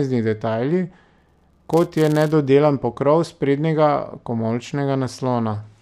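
From 1.18 to 2.33 s, just before "pokrov sprednjega", the speech carries a buzz at 172 Hz. This is a filter restarted on every block. Each block starts from silence with a small transient, which fits a 256-sample block. The ticks rise and fall with the speech level.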